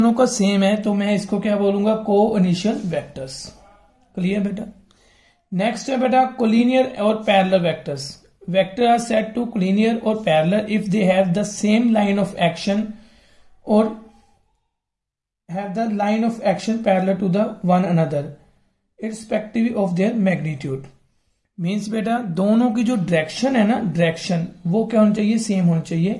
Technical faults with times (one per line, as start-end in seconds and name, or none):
none